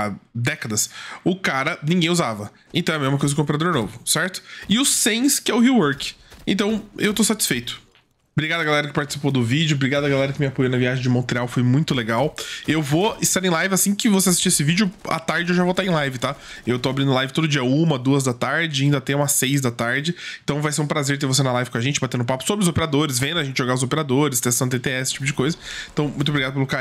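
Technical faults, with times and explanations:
Nothing in this audio trips my ear at any point, so there's simply no fault to list here.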